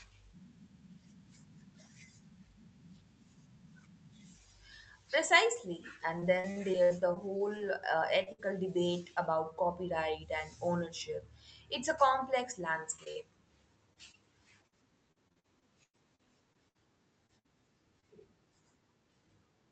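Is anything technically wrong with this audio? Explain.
Yes. The speech has packet-loss damage in several places, carried over a call path whose coding noise and top end near 8 kHz fit the Opus codec.

Repeated packet loss (robotic sound) runs from 6.19 to 7.61 s and again from 13.93 to 18.04 s. The speech turns choppy, with pieces missing. Packets kept failing to arrive: 8 gaps in the first stretch and 15 in the second, the longest 62 ms and 100 ms. Each gap was patched by extending the last sound before the next one arrived.

Short concealed packet loss shows up as brief smears or wobbles at 8.23–8.28 s and in a quick cluster at 12.96–13.00, 13.04–13.08 and 13.12–13.17 s. Each time, 20 to 40 ms of audio never reached the decoder, and the receiver filled the hole by continuing the preceding sound before blending back.

A burst of packet loss at 8.32–8.40 s sounds like a held buzz or fading hiss followed by a jump forward. 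About 60 ms went missing in a row, and the receiver extended the last sound while turning it down until real audio resumed.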